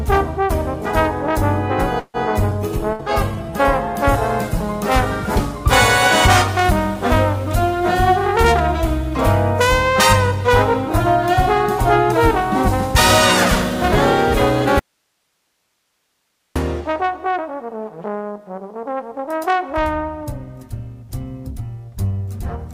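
A cluster of network-related faults opens the clip. At 1.99 s the sound stalls in a call audio freeze until 2.17 s: the last sound is stretched into a fading buzz or hiss, about 145 ms in all including roughly 40 ms of silence, before resuming where it stopped. This pattern likely comes from delayed packets draining the jitter buffer, adding about 145 ms of delay without losing content. From 2.42 s to 6.83 s a call bitrate drop sets in. The encoder falls from 96 kbps to 22 kbps and sits at its lowest for about 1.6 s, so the sound turns coarse and watery, with the top end dulled. At 2.50 s a skip ahead removes roughly 70 ms of audio. The two sides are butted together almost directly as the receiver sheds queued delay. From 2.79 s to 3.51 s a jitter buffer slow-down plays the audio at 93% speed with unchanged pitch, adding 62 ms of repeated pitch periods and pause fragments that give a drawn-out quality. 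Inside that stretch, at 2.93 to 3.02 s, a burst of packet loss drops 60 ms. The gap is concealed by a held, decaying continuation of the preceding sound, and the material in between is gone. At 14.79 s an audio dropout to a faint residue cuts the signal abruptly for about 1.8 s, leaving only hiss about 50 dB below normal level until 16.56 s. A signal lost upstream while the downstream path stayed live is the likely cause. From 16.81 s to 17.77 s a jitter buffer speed-up runs the audio at 111% speed, cutting roughly 100 ms of short pitch-period segments to reduce buffered delay, so that stretch sounds hurried at the same pitch.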